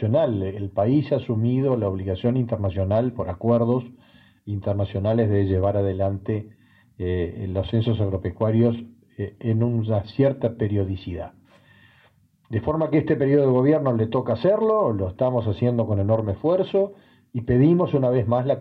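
No technical faults can be heard anywhere in the clip. There is no moment in it that calls for a timestamp or a second listen.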